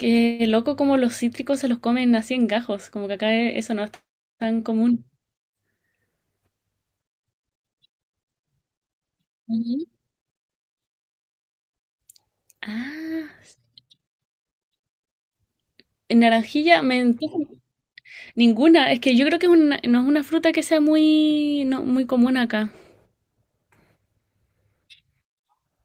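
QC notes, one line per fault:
No technical faults heard in this speech recording.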